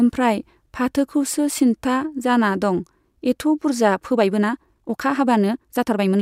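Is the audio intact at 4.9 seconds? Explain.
No, 4.9 s falls in a time-stretched section from 4.1 s on. It's sped up 1.41 times, likely by dropping short pieces, so it sounds rushed at the same pitch.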